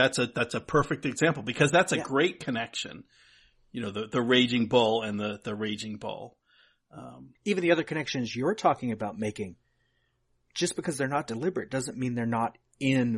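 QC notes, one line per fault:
No faults found.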